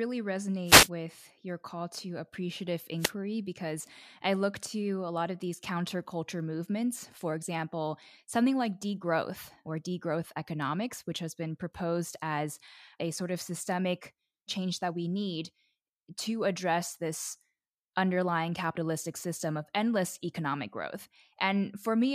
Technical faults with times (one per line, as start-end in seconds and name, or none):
0.65-0.89 wireless microphone noise hit
2.98-3.12 wireless microphone noise hit